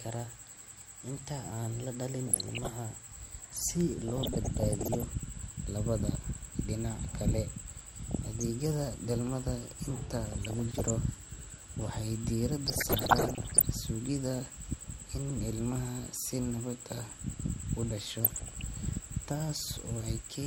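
Throughout the speech the top end is dull and the remaining bands carry a granular, gurgling roughness, with upper sub-bands flickering in and out as the bit allocation runs short. The likely cause is MP2 compression, MPEG Layer II coding that splits the signal into 32 sub-bands and drops or coarsely quantises the upper ones. The damage is plainly audible and fits a rate around 80 kbps.

On top of this come six bursts of DAB burbling, where uncorrected bit errors reach the MP2 data. These occur just after "la dhalin" at 2.27 to 2.72 s, at 4.08 to 5.04 s, at 8.10 to 8.43 s, just after "dhalmada inta" at 10.25 to 10.90 s, at 12.66 to 13.66 s, and at 18.21 to 18.62 s. Corrupted samples put short blips of noise into single sub-bands, and corrupted scale factors throw sub-bands up or down in level for up to a frame. The error rate points to somewhere between 0.4 percent and one percent, and it is worst in the last two bursts.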